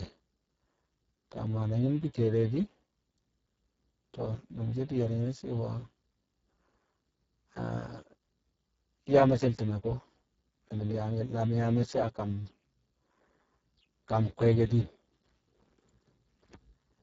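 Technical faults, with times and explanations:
Throughout, Speex codec: the speech sounds hoarse and noisy, which fits Speex at a very low bitrate near 6 kbps, where too few bits remain to code the excitation. On a spectrogram, harmonics smear into grainy noise and nothing appears above 7.7 kHz.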